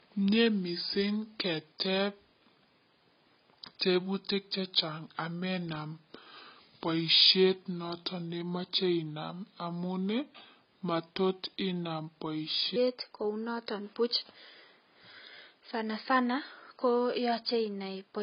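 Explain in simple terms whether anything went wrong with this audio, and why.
For the first 12.76 seconds the section is at the wrong speed, likely from being played against the wrong clock. It runs at about 0.76 times normal, so the speech is slow, drawn out and roughly five semitones deeper until "kounoton buch" starts.

Throughout, AAC compression, likely squeezed hard to save space, has thrown away detail. Nothing above 5.1 kHz survives, so the speech sounds dull and muffled, with a smeared, warbly, fizzy edge on hissing sounds.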